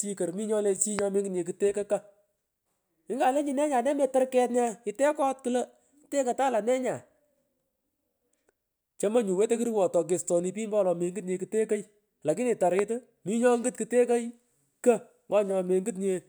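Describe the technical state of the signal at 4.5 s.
At 4.5 s the speech signal is intact, with no audible fault present at that moment.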